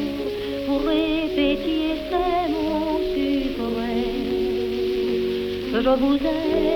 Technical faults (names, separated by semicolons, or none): bit error spike